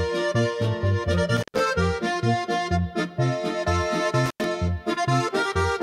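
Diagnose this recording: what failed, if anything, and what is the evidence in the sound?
Analogue wiring failed with an intermittent contact. The sound cuts out near 1.37–1.60 s and 4.26–4.45 s, with crackle at the edges. A loose connection opened for roughly 110 and 90 ms.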